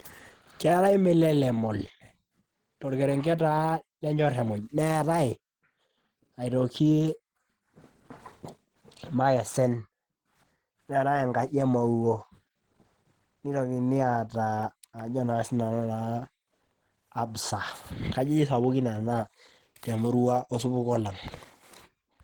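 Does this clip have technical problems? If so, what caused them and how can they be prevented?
Yes. Across the whole speech recording the sound is hoarse, with plainly audible codec damage, though content reaches about 20.2 kHz. The cause is likely Opus compression in its hybrid speech mode at around 16 kbps. Encoding at a higher bitrate prevents this.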